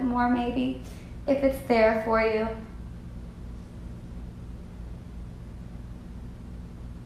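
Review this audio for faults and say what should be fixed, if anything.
Nothing needs fixing; no faults can be heard anywhere.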